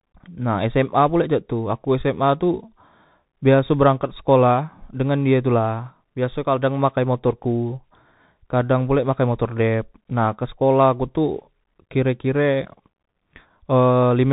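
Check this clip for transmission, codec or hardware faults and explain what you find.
There's one fault, and it runs through the whole clip: the speech has gone through the Bluetooth CVSD headset codec. Nothing gets past about 3.8 kHz, so the top end is simply gone. CVSD sends one bit per sample, just up or down with an adapting step, which fits a 64 kbps link. Fast, loud high sounds outrun that step, so the s sounds turn scratchy and there's a grainy hiss under the speech. The damage is plainly audible.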